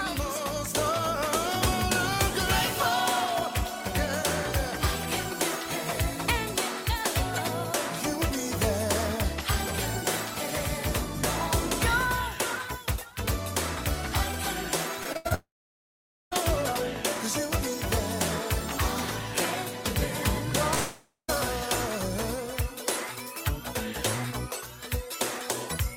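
From 15.03 to 15.32 s there's repeated packet loss: four short gaps, the longest 80 ms, patched by stretching the last sound, so it goes choppy and robotic. Right after, 15.34 to 16.33 s, the audio drops out, fading to about 0.85 s of silence. Again at 20.74 to 21.30 s it dies briefly, and a long network dropout is the likely cause of both.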